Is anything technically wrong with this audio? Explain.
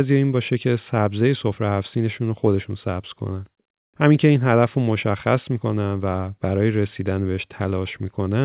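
No, nothing's wrong here: it's just speech over a phone-style call line, and the lack of anything above 4 kHz is what you'd expect from a G.711 mu-law codec at 64 kbps.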